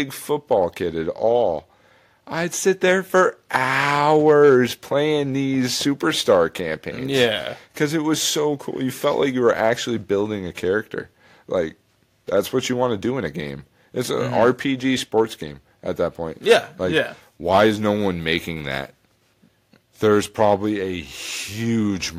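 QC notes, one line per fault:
No audible faults found.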